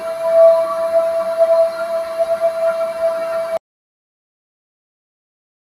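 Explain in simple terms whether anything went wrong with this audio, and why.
A noise suppressor built for speech was left running on these sounds, so it keeps treating steady tones and tails as noise, making them dip and pump throughout. Then at 3.57 s an audio dropout to silence begins, likely from the input being lost: the sound cuts off into dead silence that lasts to the end.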